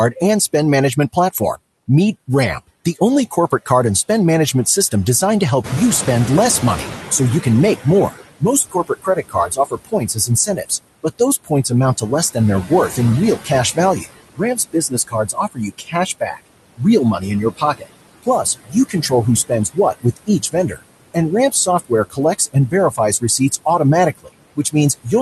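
Throughout the speech, the background sinks between phrases and swells beneath them. These are noise suppressor artifacts, from a suppressor pulling steady noise down by about 20 dB frame by frame. From 5.64 to 8.19 s, just after the room noise jumps by about 12 dB near 5.5 s, the louder noise comes through with only about 15 dB of reduction and then settles over roughly 2.5 s. This is the noise suppressor catching up, as its noise estimate trails the sudden rise. Speech cut by the noise suppressor follows in eight stretches: 7.84 to 10.71 s, 11.03 to 12.98 s, 13.36 to 16.81 s, 17.19 to 17.85 s, 18.23 to 19.12 s, 19.49 to 20.79 s, 21.52 to 23.66 s, and 24.15 s to the end. Word endings and soft sounds turn faint or swallowed, dipping by about 17 to 21 dB, for around a second in total in the longer stretches and a few tenths in the shorter ones. The suppressor is misreading parts of the speech as noise. 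All of this rides on an Opus call path whose top end stops near 12 kHz.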